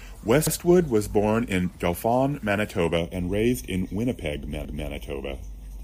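Repeated frames at 0.47 to 0.55 s, just before "was born in": an 85.3 ms block, which points to a single compressed frame, plays twice, giving a brief stutter and adding 85.3 ms. Channel delay (comb filtering) from 2.98 s to the end: one channel lags by roughly a third of a millisecond, so the mono sum cancels at evenly spaced frequencies starting around 1.5 kHz, sounding hollow and phasey. Repeated frames again at 4.65 to 4.91 s: a 256 ms stretch is replayed once, a longer audible stutter that adds 256 ms.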